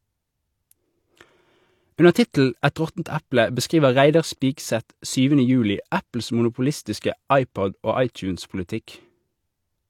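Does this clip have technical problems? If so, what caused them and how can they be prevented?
Yes. Pre-echo appears at 2.13 to 2.15 s and again at about 4.40 s, smearing short hiss roughly 21 ms and 15 ms ahead of sharp speech onsets. The codec spread quantisation noise across blocks where attacks arrived late. A spectrogram shows broadband haze before each onset, and the waveform shows low-level fuzz where silence should be. Encoding at a higher bitrate, or with a codec using block switching for transients, prevents it.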